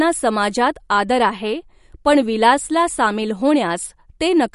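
Speech throughout with plainly audible MP3 compression damage: nothing above 11.2 kHz, plus watery, swirly artefacts, likely from an encoder starved of bits, which fits roughly 48 kbps.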